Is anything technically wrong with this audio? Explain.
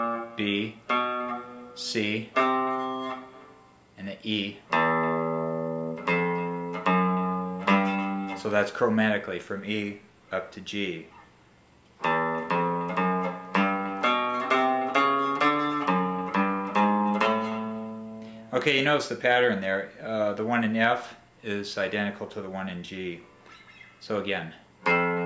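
No, nothing technical stands out here; it all sounds steady and intact, with no problems to flag.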